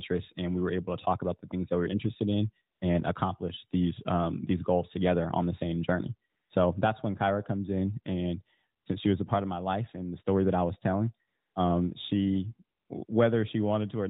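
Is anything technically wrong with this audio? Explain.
Yes. AMR comfort noise fills six brief pauses: 2.74–2.82 s, 6.30–6.50 s after "on the same journey", 8.82–8.86 s after "comes in and", 11.28–11.56 s, 12.78–12.90 s, and 13.06–13.08 s after "was telling um she". The phone stopped sending speech frames there. The receiver substituted smooth synthetic noise. The real background switches out and back in.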